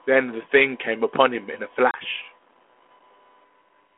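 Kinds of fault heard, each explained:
Packet loss on an ADPCM call: at 1.91 s about 30 ms, roughly three packets, drops to silence within the 32 kbit/s G.726 stream. The decoder's predictor and step size lose track, so sound returns disturbed until about 1.99 s. A waveform and spectrogram show a hard-edged blank gap.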